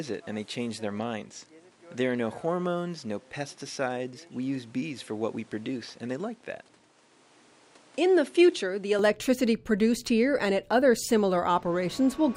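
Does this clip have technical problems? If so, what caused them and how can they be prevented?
Yes. The input was likely switched to a poorer device from 0.0 s to 8.99 s. Through that stretch nothing reaches above 11.4 kHz, so the sound is duller, somewhat quieter and carries a faint extra noise floor, clearing abruptly at 8.99 s with no gap. Locking the recording to one chosen microphone and disabling automatic device switching prevents this.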